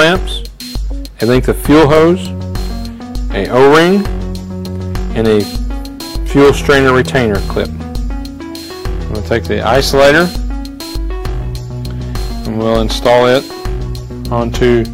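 Hard clipping recurs seven times: 1.23–2.13 s, 3.37–3.97 s, 5.18–5.40 s, 6.36–7.61 s, 9.32–10.23 s, 12.65–13.38 s and 14.33–14.78 s. In each stretch the signal is pushed past what a stage can pass, by about 6 to 14 dB. The peaks are sliced flat. Those flat tops add high harmonics. The two mildest spans, near 5.2 s and 14.3 s, are overdriven by about 6 dB. The rest are overdriven by about 11 to 14 dB.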